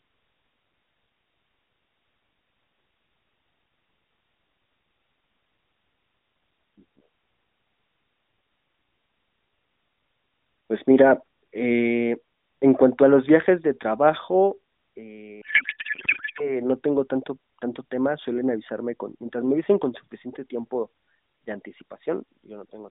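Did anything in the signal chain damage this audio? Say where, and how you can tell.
Yes, a codec payload misread. From 15.42 to 16.62 s, before "no tengo tanto tanto", speech becomes garbled warble. This fits octet-aligned AMR frames unpacked as bandwidth-efficient.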